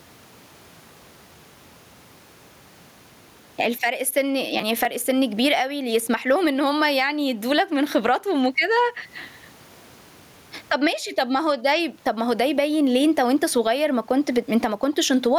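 Gain pumping runs through the whole speech clip: the gain swings by about 20 dB, which flattens the level. This is likely input gain set far too high, with a fast limiter clamping down on each peak.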